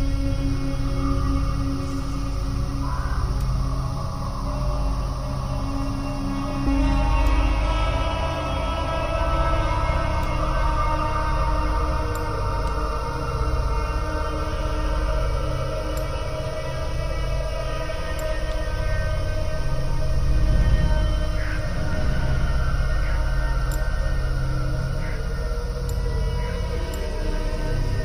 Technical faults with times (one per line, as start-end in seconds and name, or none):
none